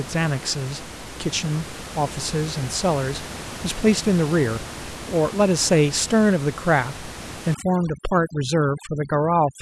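From 7.55 s to the end at 9.62 s, overdone noise removal cuts bands near the room-noise floor, leaving twinkling near-silence and cutting quiet parts of the voice with it.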